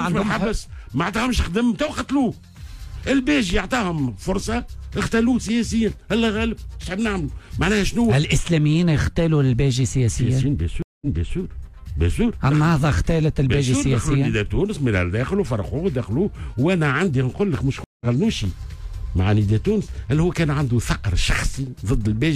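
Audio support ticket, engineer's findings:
Stream reconnect, 10.82–11.38 s. Dropout of about 0.19 s, then playback resumes 0.37 s earlier, so a short stretch repeats. Likely cause: the server resent a burst to a fresh decoder. Waveform shows a flat gap, then a soft ramp-in.

Stream reconnect, 17.84–18.06 s. Silence of about 0.17 s, and the audio picks up roughly a fifth of a second later, so material is skipped. Spectrogram shows a blank vertical band and a discontinuity on restart.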